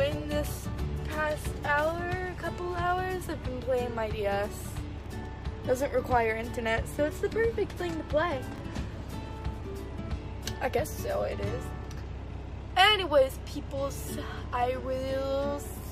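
The audio has two brief jumbles of chunks out of order. From 4.98 to 5.06 s, a 20 ms chunk plays three chunk-lengths late, after the material that should follow it. At 8.56 to 8.60 s, another 20 ms chunk lands one position late. Each event has hard joins. Unlike a dropout, nothing goes missing and no gap opens. The sound is all there, briefly shuffled, which points to late-arriving or misordered buffers.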